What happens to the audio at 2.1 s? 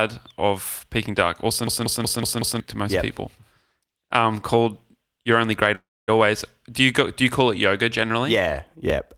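At 2.1 s the speech is caught in a system hang loop running from 1.67 to 2.60 s. The driver stalled while the hardware replayed one 186 ms buffer five times, a machine-gun stutter at 5.4 Hz that fits an 8192-sample buffer, losing about a second of audio.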